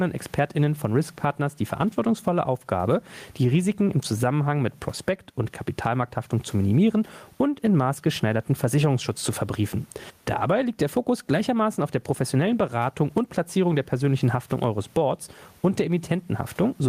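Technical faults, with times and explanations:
Throughout, gain pumping: the gain swings by around 15 dB, pulled down under every loud syllable, squashing the dynamics; the room noise sits about 45 dB below the speech. This is likely a fast limiter or compressor reacting to input gain set far too high.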